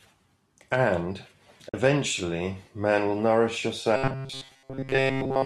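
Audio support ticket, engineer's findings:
AAC frame loss with muting, 1.69–1.74 s. Soft-edged dropout. About 50 ms missing, consistent with five 10 ms frames of the light-damage AAC-ELD stream being lost and zeroed by the decoder. Spectrogram: clean full-band vertical gap with tapered edges. Waveform: smooth envelope dip to silence.

Robotic sound from repeated short buffers, 3.96 s to end of clip. Rigid metallic 134 Hz buzz loosely following the speech. Likely cause: buffer starvation, with the last ~7.5 ms replayed and most of the real audio skipped. Spectrogram: flat harmonic comb at 134 Hz multiples. Waveform: near-identical repeating short cycles.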